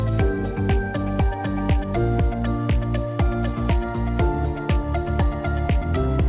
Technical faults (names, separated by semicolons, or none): none